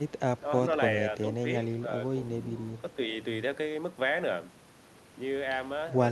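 The speech dips briefly at 0.41 to 0.45 s, 1.82 to 1.9 s and 3.06 to 3.18 s, each time by around 5 dB. The likely cause is speech suppressed in double talk. An echo canceller mistook this talker for echo and turned it down.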